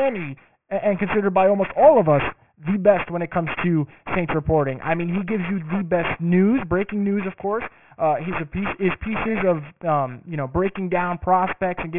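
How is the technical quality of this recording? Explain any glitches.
The recording is degraded by aliasing across the whole clip. The audio appears to have been resampled downward, consistent with a 6 kHz rate, without an anti-aliasing filter. Content above 3 kHz folds back beneath that point as unrelated tones, not far below the speech in level. Sibilants come out gritty and metallic, and the spectrum stops abruptly at 3 kHz.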